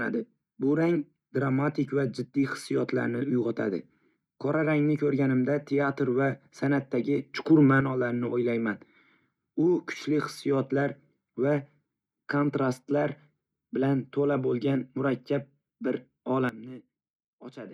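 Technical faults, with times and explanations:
7.34–7.81 s and 16.49 s to the end, sudden gain jump: speech and background noise leap up together by about 6 dB for half a second, then later fall by about 14 dB and stay down. The likely cause is a gain change applied instantly, without a ramp.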